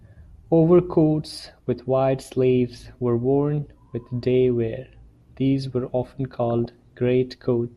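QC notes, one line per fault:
6.38–6.82 s, DAB burbling: for just under half a second the speech picks up short noise blips as individual frequency bands jump in level and drop back. Residual bit errors have slipped past error correction into the MP2 stream, corrupting scale factors and samples so single sub-bands misbehave for up to a frame each. The length of the disturbance points to a run of damaged frames, 21 in all, with an error rate of a few tenths of a percent.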